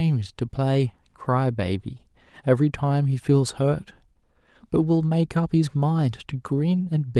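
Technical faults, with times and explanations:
No technical faults are audible.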